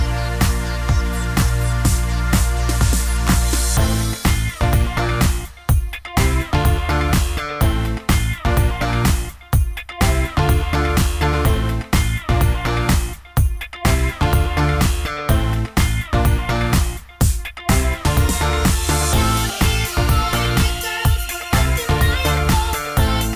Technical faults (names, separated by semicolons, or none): none